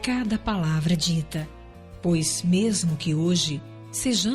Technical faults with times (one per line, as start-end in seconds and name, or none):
0.89-2.03 drift correction step